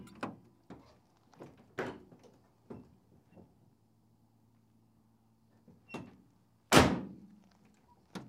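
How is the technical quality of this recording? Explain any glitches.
The recording has no audible technical glitches, and the signal holds steady and intact throughout.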